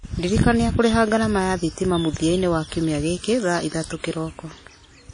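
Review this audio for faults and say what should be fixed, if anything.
Throughout, smeared quantisation noise makes the speech ring, and nothing sits above 10.1 kHz. Likely WMA compression at a low bitrate. Use a higher bitrate.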